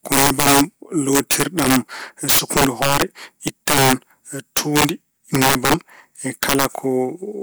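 Violent cracks burst through the loud speech at 0.12–0.61, 1.13–1.76, 2.29–3.02, 3.48–3.93, 4.57–4.89, 5.35–5.74 and 6.43–6.65 s. This is integer overflow: peaks driven about 5 to 10 dB past the limit wrap to the opposite sign instead of being held.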